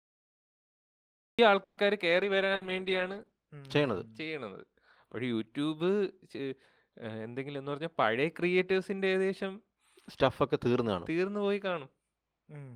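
The speech starts late. Digital silence runs until 1.39 s, then the sound cuts in mid-syllable with no natural attack. That is a cut-off start: the recording or stream began after the talker was already speaking. From 1.63 to 1.80 s the sound stalls into a held, fading continuation of the last sound. About 140 ms is filled in, and then the speech picks up exactly where it stopped, with nothing lost. This is a call audio freeze, likely from delayed packets draining the jitter buffer. From 2.11 to 4.47 s the speech turns rough and duller. This is a call bitrate drop. The encoder fell from 32 to 15 kbps and stayed at the lowest rate for about 1.28 s. Coarser coding and lost treble follow from that. Inside this stretch, at 2.55 to 2.64 s, there is a burst of packet loss. About 60 ms is replaced by a fading continuation of the previous sound. When the speech resumes, 60 ms of real audio is gone. 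From 7.45 to 9.31 s the speech sounds hurried but keeps its pitch. This is a jitter buffer speed-up. The receiver trimmed short pitch-period pieces, about 150 ms in all, and played that stretch at about 107% speed to cut its backlog.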